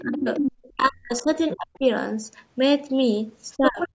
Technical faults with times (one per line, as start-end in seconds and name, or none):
0.00-0.72 other side's voice leaking through
0.02-1.84 speech suppressed in double talk
1.48-1.57 other side's voice leaking through
3.52-3.88 other side's voice leaking through
3.57-3.93 speech suppressed in double talk